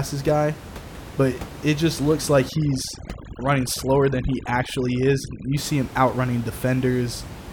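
From 2.49 to 5.57 s, overdone noise removal pulls frequency bands near the noise estimate far down, turning the room noise, about 14 dB below speech, into twinkling, warbling specks that show on a spectrogram as scattered isolated spots in a patchy noise floor.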